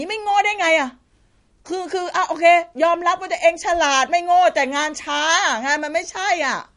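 Across the whole speech clip the sound is dull and plainly watery, with nothing audible above about 10.6 kHz and a swirling, metallic edge on s sounds, while onsets come across smeared. The likely cause is MP3 compression at a low bitrate, around what 40 kbps would give: starved of bits, the encoder chops off the treble at a fixed point and drops weaker frequency components that flicker in and out from frame to frame.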